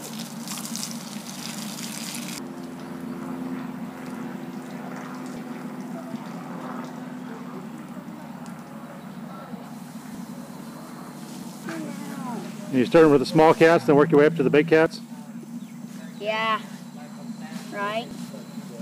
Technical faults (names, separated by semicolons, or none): dropped buffer (overrun)